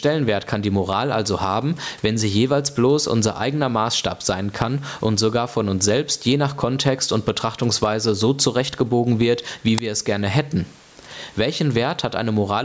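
Gain pumping runs through the whole clip: the input gain is likely set far too high, so a fast limiter keeps clamping it, and the gain swings by roughly 15 dB under each loud syllable. At 9.78 s, an uninitialised buffer plays leftover memory as audio, a brief, loud crack lasting about 5 ms, which fits a 256-sample block.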